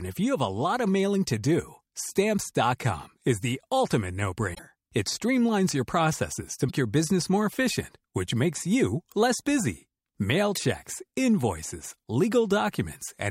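Speech with three brief glitches, at 4.53–4.59 s, 6.68–6.71 s and 10.54–10.57 s, each a skip forward followed by a chirp, noise burst or short hole spanning about one to two 26.1 ms frames. A likely broken MP3 bit reservoir after dropped frames; spectrograms show broadband vertical smears, waveforms abrupt discontinuities.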